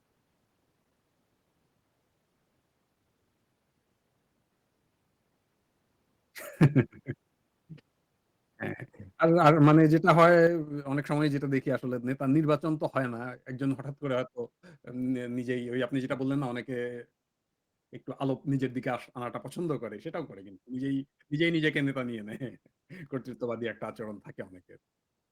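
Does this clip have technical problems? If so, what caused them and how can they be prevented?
Yes. Microphone overload at 6.62–6.79, 9.45–9.77 and 10.08–10.27 s gives harsh crackle. Peaks are flattened on the waveform, with broadband smear on the spectrogram. Likely cause: input pushed about 5–7 dB past the converter's limit. Prevention: set the microphone input lower or move back from it.

Microphone volume stepped down at 9.48 and 10.47 s, where the level drops suddenly by about 2 dB, then about 5 dB. The waveform envelope steps down abruptly. The likely cause is call software reducing gain after clipping. Prevention: start with a correct input level so no automatic correction is triggered.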